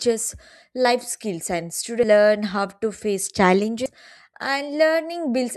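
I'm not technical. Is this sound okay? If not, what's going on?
No. The speech jumps forward at 2.03 s and 3.86 s. These are compressed frames skipped: missing 32 ms chunks drop roughly a third, then a sixth, of a second.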